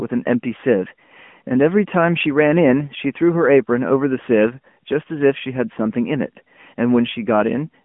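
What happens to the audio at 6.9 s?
At 6.9 s the speech is still going through the AMR narrowband mobile codec that runs the whole clip. The line is squeezed to roughly 150 Hz to 3.4 kHz, and the vocal-tract model leaves it buzzy and synthetic, which fits a mid-rate mode around 10 kbps.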